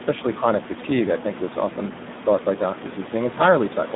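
From start to finish the speech carries heavy Speex codec damage. The CELP coder has too few bits for its excitation signal, so the speech comes out hoarse and noisy with a buzzy, partly robotic edge, which fits a bitrate around 8 kbps. The line is confined to roughly 150 Hz to 3.6 kHz, with nothing above 3.8 kHz, giving a muffled narrowband quality. The room noise, about 11 dB below the speech, is also passed through this degraded channel.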